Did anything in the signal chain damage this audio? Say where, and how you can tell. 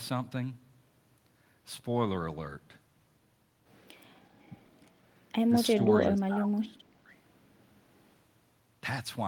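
Yes: speech suppressed in double talk, in call processing, from 6.09 to 7.13 s, dipping about 25 dB, likely the echo canceller turning down its own talker along with the loudspeaker echo, not a steady dropout.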